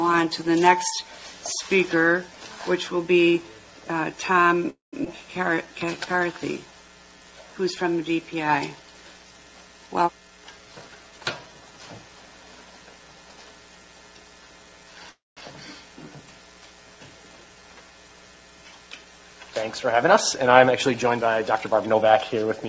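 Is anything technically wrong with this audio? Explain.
Yes. The audio has two call audio freezes, a skip ahead, a jitter buffer slow-down and two jitter buffer speed-ups. Its top end stops at 8 kHz, which fits a G.722 call codec at 64 kbps.

At 4.70–4.95 s and 15.09–15.39 s there are call audio freezes. The sound stalls into a fading fill of about 0.23 s and 0.27 s, with roughly 0.15 s and 0.19 s of silence, then resumes intact. The likely cause is delayed packets draining the jitter buffer.

At 5.05–5.08 s there is a skip ahead. About a tenth of a second of audio is dropped, and the two sides join almost directly.

From 5.50 to 6.39 s there is a jitter buffer slow-down. Repeated pitch periods add 108 ms, so the audio plays at 89% speed at the same pitch and sounds drawn out.

From 10.16 to 11.19 s and from 20.60 to 22.69 s there are jitter buffer speed-ups. The receiver removes short pitch-period pieces, roughly 0.2 s each time, which gives 122% and 109% speed at the same pitch and a hurried feel.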